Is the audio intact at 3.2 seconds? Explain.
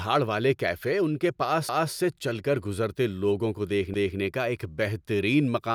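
Yes, at 3.2 seconds the speech runs cleanly, with no dropout, click, distortion or other fault at that moment.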